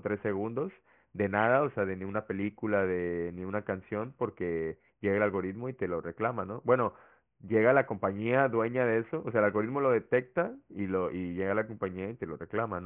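Aliasing runs through the whole speech clip. The audio was downsampled with no filter first, so content above 3 kHz folds back as false, unrelated tones roughly 25 dB below the speech, which fits a drop to a 6 kHz rate. Sibilants turn gritty and metallic where plain band-limiting would only sound dull.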